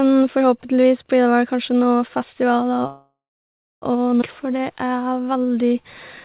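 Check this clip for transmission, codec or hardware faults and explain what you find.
Three delivery faults interrupt the speech, all from about 2.9 s on. The band stops at 4 kHz throughout, which fits a narrowband G.711 mu-law call path at 64 kbps.

From 2.87 to 3.85 s there is a call audio freeze. Packets were likely held up in transit, draining the jitter buffer, so the receiver stretched the last sound into a fading buzz or hiss that drops to silence for about 0.67 s. The speech then resumes exactly where it stopped, with nothing lost.

At 4.21 to 4.25 s comes a skip ahead. A stretch of audio was dropped while later audio was already waiting, removing roughly seven tenths of a second of speech. The two sides are spliced almost directly, so the talk lurches forward abruptly.

From 4.44 to 5.82 s a jitter buffer slow-down rebuilds the reserve. Single pitch periods are repeated over and over, adding 148 ms, so the speech plays at 90% speed at unchanged pitch and sounds drawn out.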